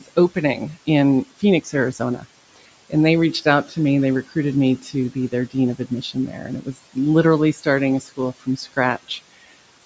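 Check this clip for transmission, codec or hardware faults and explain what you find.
The speech has noise suppressor faults, and the suppressor also cuts into the speech itself.

Noise suppressor artifacts run through the whole clip. The suppressor pulls steady background down by about 18 dB, frame by frame. Gaps sink lower. Leftover noise rises under the speech.

Speech cut by the noise suppressor occurs at 0.00 to 0.37 s, 1.31 to 2.25 s, 2.56 to 2.93 s, 3.33 to 3.77 s, 4.80 to 6.96 s, 7.54 to 7.66 s and 8.01 to 9.10 s. The suppressor misreads soft speech as noise and lowers it by about 11 to 18 dB. Only short stretches are hit, roughly half a second at most within 4.80 to 6.96 s. Consonants and word endings sound swallowed. The room noise sits well below the speech, and the call microphone processing stops at 8 kHz.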